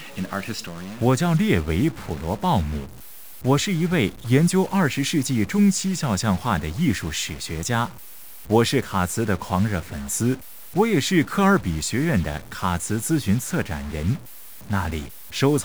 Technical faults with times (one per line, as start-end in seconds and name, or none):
0.00-15.64 stuck bit